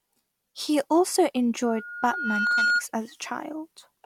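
From 1.62 s to 2.84 s the speech is overtaken by loudspeaker feedback squeal: a microphone is hearing the loudspeaker it drives, and at 1.4 kHz the loop gain tops one, so that frequency keeps reinforcing itself. It swells over roughly a second into a piercing single tone that ends up louder than the speech, by something like 5 dB. That gradual self-driven build-up at one pitch sets it apart from a steady interfering whistle or hum, which would start at full strength.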